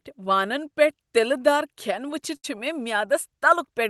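A speech clip carrying a burst of packet loss from 2.36 to 2.45 s, right after "دار کھٮ۪ن". Roughly 80 ms of audio never arrived in time to be played. The receiver covers about 70 ms of the gap by extending the last received sound and letting it fade. Playback then resumes further along, so that stretch of speech is simply missing. The surrounding audio has the band limit near 12 kHz typical of an Opus call path.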